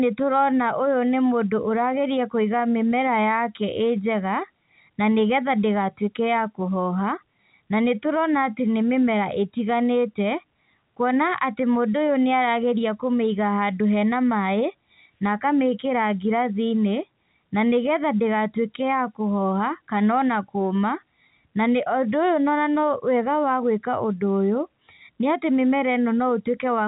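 No faults occur anywhere in this speech recording.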